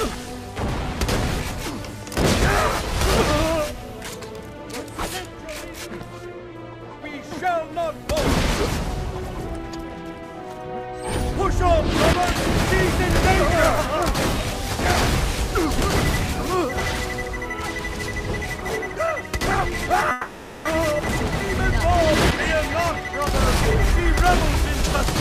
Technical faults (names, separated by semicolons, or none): long network dropout